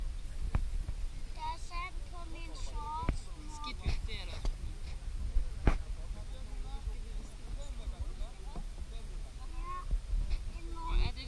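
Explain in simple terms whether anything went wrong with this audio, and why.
Nothing went wrong here: the audio shows no technical faults anywhere in the recording.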